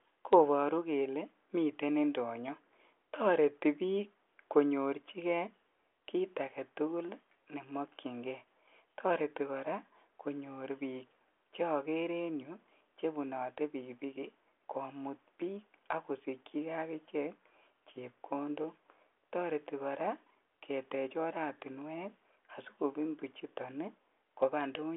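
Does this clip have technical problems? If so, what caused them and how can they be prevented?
No, this clip has no technical problems, so there is nothing to prevent.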